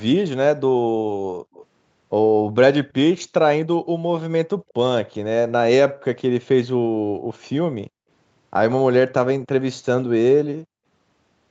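Speech carried over a call, band-limited at 8 kHz by the call's microphone processing, with two echo-related faults. At 1.53 to 1.65 s, and briefly again at 4.69 to 4.73 s, a faint delayed copy of the voice trails the original by 186 ms, sitting about 25 dB and then about 35 dB below the direct speech. This is an echo leak, likely from a far end on loudspeaker whose echo canceller failed to fully subtract what its microphone picked up, so the residue was sent back. Separately, the background sound is gated by the echo canceller: the room tone dips by about 40 dB at 4.57, 5.92, 6.99 to 7.3 and 7.87 to 8.09 s. The first two dips are brief, around a tenth of a second each, and the last two are longer, about 0.3 s and 0.2 s. In each case the canceller clamps the microphone while loudspeaker playback is active and releases it afterwards, so the ambience drops out and then returns.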